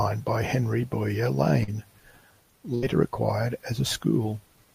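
A speech recording with two packet-loss faults. The first is a short concealed packet loss between 1.63 and 1.72 s. About 40 ms of audio failed to arrive in time, and the receiver patched the hole with roughly 42 ms of synthesized continuation before crossfading back into the real signal. It registers as a brief smear or wobble. On a spectrogram, the harmonics or noise bands just before the gap are stretched flat across it, with a slight blur where the patch rejoins. The second is a burst of packet loss from 2.75 to 2.84 s, where about 80 ms went missing together. The concealment held the last sound for around 76 ms and faded it, so you hear a short held buzz or fading hiss before the audio resumes further along, with that stretch gone. On a spectrogram this appears as frozen, steadily darkening bands ending in an abrupt jump, and the waveform envelope tapers down and then restarts.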